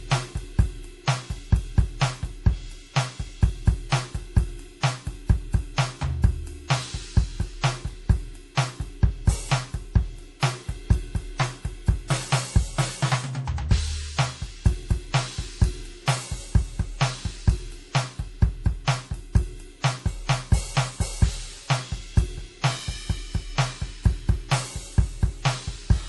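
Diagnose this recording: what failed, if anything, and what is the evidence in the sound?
The fault sits at the codec stage. Across the whole music clip the treble stops dead at about 11.5 kHz, and codec damage is plainly audible from start to finish. The hard ceiling and the steady smearing point to MP3 compression as the likely cause, at a low rate that fits about 48 kbps. Short of bits, the encoder discards everything above that cut-off. It drops weak frequency lines in some frames and keeps them in others, so fine detail flickers.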